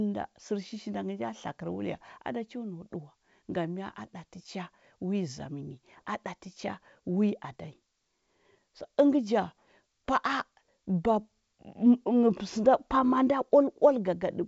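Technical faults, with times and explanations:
Nothing stood out on listening; the speech comes through as ordinary G.722 wideband telephone audio at 64 kbit/s, with content reaching up to about 7.7 kHz.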